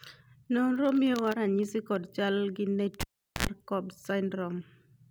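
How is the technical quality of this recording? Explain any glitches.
The recording has one clear glitch. From 3.01 to 3.47 s the cable is pulled and plugged in: a pop, about 410 ms of near silence, then roughly 80 ms of 60 Hz mains buzz as the plug tip touches, and another pop. The buzz and paired pops set it apart from a plain dropout.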